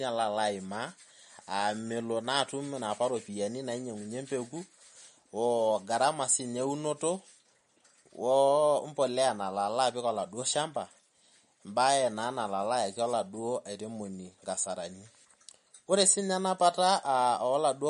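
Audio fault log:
Throughout, MP3 compression: watery, swirly speech with nothing above 10.6 kHz, likely from an encode near 41 kbps starving weak frequency lines of bits.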